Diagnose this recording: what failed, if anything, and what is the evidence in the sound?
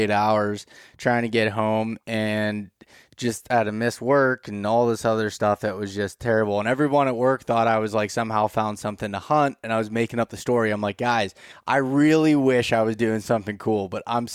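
Nothing failed: listening through this speech recording turns up no fault at any stage, so there is no evidence in the sound to diagnose.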